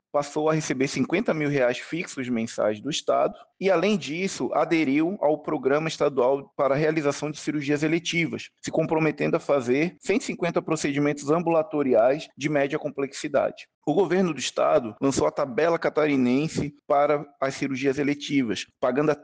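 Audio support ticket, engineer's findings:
No fault found on listening; nothing abnormal heard anywhere in the recording, no component implicated.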